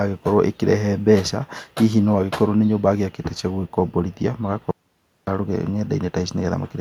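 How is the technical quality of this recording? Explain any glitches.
The recording has one clear glitch. At 4.71 s the speech cuts off mid-flow into dead, total silence, with no room tone, until it resumes at 5.27 s, so about 0.56 s of audio is missing. This audio dropout to silence likely comes from a lost input while the recorder kept writing silence.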